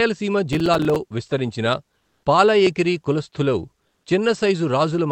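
From 0.53 to 0.96 s the speech carries a burst of processor overload crackle: a gritty, tearing texture over the sound. The processor repeatedly failed to deliver its short audio buffers on time, each a few milliseconds long, and a dozen or more deadlines passed in a row. Each miss left a brief hard-edged silence, and the rapid string of these dropouts fuses into crackle that stops once the load eases.

Two pauses then lose their real background, which sits far below the loud parts of the speech, roughly 50 dB down. From 1.99 to 2.23 s, 240 ms of it is replaced by a flat, featureless hiss about 3 dB louder than the surrounding room sound. From 3.87 to 4.03 s, 160 ms gives way to similar smooth noise about 2 dB quieter. This is comfort noise in place of the background, likely from Opus discontinuous transmission: the sender went quiet in the pauses, and the receiver filled the gaps with synthetic noise, heard here alongside the Opus coding's 8 kHz bandwidth limit.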